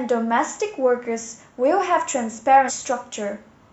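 A short speech recording with one fault: damaged data in a compressed stream between 2.65 and 2.71 s. For about 60 ms the decoder is fed corrupted frames it cannot read correctly, so it loses sync and hunts for the next valid frame header, producing a brief chirp, squawk, click or short hole. On a spectrogram this shows as a narrow vertical disruption cutting across the speech harmonics. The waveform shows an abrupt discontinuity there.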